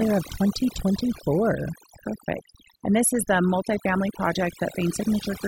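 A speech recording with overdone noise removal running through its whole length. The gaps between phrases drop to an unnatural near-silence scattered with twinkling specks. Quieter detail in the voice is thinned out. A noise reduction stage was pushed too hard: it pulls individual frequency bands down or shuts them off whenever they sit close to its noise estimate, so low-level parts of the speech are stripped away along with the noise.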